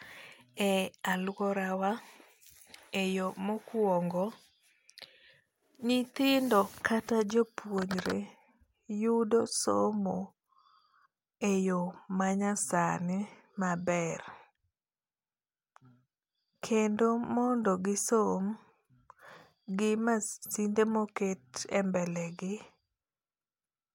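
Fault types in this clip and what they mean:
No technical faults detected in this speech recording.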